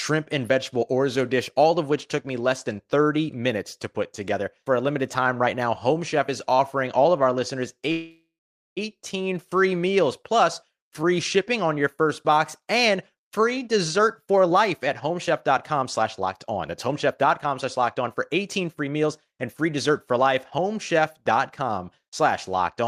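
It's a speech clip with two problems. At 7.91 s, right after "all of our listeners", the audio stops and the last sound hangs on as a fading buzz that drops to silence for about half a second. The audio picks up at 8.79 s with "free meals plus free", so roughly 0.85 s of gap has been added but nothing is lost. That's a call audio freeze, likely from packets stalling in transit so the jitter buffer ran dry. Then a jitter buffer speed-up follows "on your first box". From 12.96 to 18.03 s the speech runs about 15% fast, and from 18.45 to 19.91 s, just before "for life", it runs about 7% fast. The pitch stays the same, but it sounds rushed because the receiver keeps clipping out tiny pitch-period slices to drain the backlog, around 0.7 s in the first stretch and a tenth of a second in the second.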